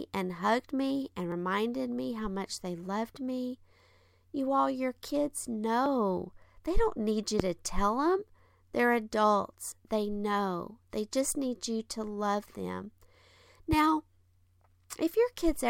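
At 1.32 s, between "and hugged me and" and "me how much they", the speech jumps forward. This is a dropped buffer (overrun), most likely from the program failing to collect its samples before the hardware overwrote them. Roughly 40 ms of audio is gone and the two sides are butted together with no silence. The same thing happens at 5.86 s just after "all your kids" and at 9.72 s, each time losing about 20 ms. On a waveform each shows as a sudden discontinuity where the shape breaks without a gap. A spectrogram shows a thin vertical broadband line and a slight mismatch in the harmonics on either side.

From 7.40 to 7.43 s, after "don't need you" and before "to tell them", a single loud pop sits on top of the speech, which carries on underneath. It is likely a voltage pulse added to the signal, such as static or a switching glitch. It rises far above the surrounding level, which appears as one tall spike on the waveform and a bright full-height stripe across all frequencies on the spectrogram.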